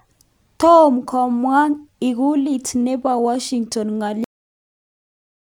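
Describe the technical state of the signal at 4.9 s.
At 4.9 s the signal is dead digital silence, inside a cut-off end that runs from 4.24 s to 5.52 s. The speech stops abruptly at 4.24 s, mid-sound, because the final stretch of audio was never written out, so nothing decays or tails away. On a waveform the trace collapses to a flat line at 4.24 s. On a spectrogram every frequency band goes blank at once along a sharp vertical edge, with no fading energy afterwards.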